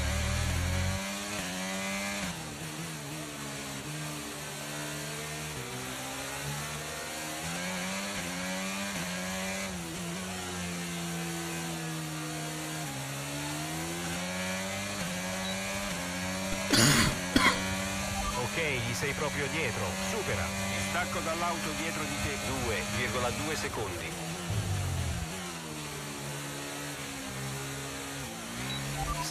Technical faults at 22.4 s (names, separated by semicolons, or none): none